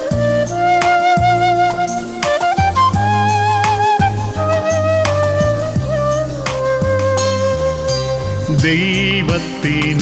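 There are no technical faults to describe in time order: the sound carries only the narrowed band, with nothing above 8 kHz, that is normal for a call path.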